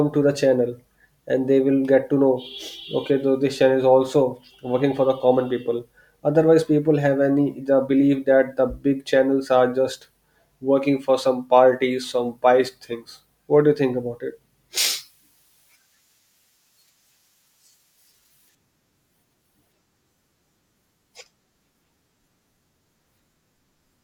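From 14.78 s to 18.55 s, pre-emphasis is left on. The treble was lifted before recording or transmission, but the matching de-emphasis was never applied. The high end stays boosted, about 11 dB at 10 kHz relative to 1 kHz. That rising shape fits a J.17 curve. The speech turns thin and bright. Sibilants hiss and sting. The body of the voice seems to drop away until the section ends.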